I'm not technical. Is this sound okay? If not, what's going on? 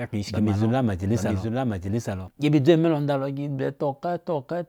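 No. There's a doubled audio track from the very start until 2.28 s. The same speech plays twice, the second copy trailing about 0.7 seconds behind and a bit quieter. It likely comes from a second, slower recording path. The echo cuts off abruptly.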